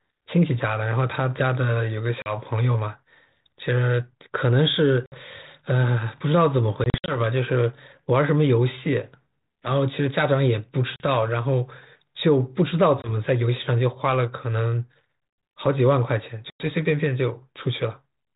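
A speech recording over a G.726 ADPCM line, band-limited below 4 kHz with the light coding grit you'd expect at 32 kbit/s, that suffers packet loss on an ADPCM call six times: around 2.22, 5.06, 6.84 to 7.18, 10.96, 13.02 and 16.5 s. Each gap is a hard-edged silence of 20 to 100 ms, and the one near 6.84 s is a scatter of short dropouts. Afterwards the decoder's predictor and step size have drifted from the sender's, so the speech returns slightly distorted before settling within a few tens of milliseconds.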